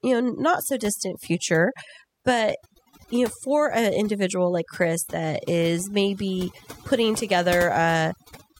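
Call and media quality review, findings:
Overdone noise removal, throughout. Background drops, breaks up into twinkling specks. Denoiser set too strong, pulling bands near its noise estimate down or out, quiet speech detail included. Unlike codec low-bitrate smearing, artefacts track noise floor, not speech transients.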